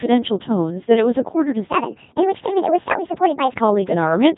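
Codec 2 vocoder damage runs throughout: the speech is rebuilt from pitch and envelope as sine waves, sounding robotic and buzzy, consistent with about 2.4 kbit/s, with nothing above 3.8 kHz.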